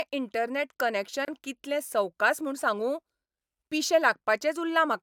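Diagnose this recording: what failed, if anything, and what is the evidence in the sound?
What failed is a gap at a join of encoded pieces, which lives at the codec stage. The speech drops out at 1.25 s for about 29 ms, to 1.28 s, with smeared edges, then resumes exactly where it left off. That points to separately encoded segments glued together untrimmed, leaving the encoder's start-up delay and last-frame padding in as silence. The joins fall 4 s apart, so this is the only one inside the clip.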